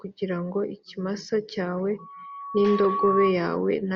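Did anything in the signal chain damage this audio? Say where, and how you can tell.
Yes: loudspeaker feedback squeal from the analogue mic-to-speaker loop, 1.98 to 3.39 s. A 1.1 kHz tone swells over about a second, unlike steady interference, as loop gain exceeds one.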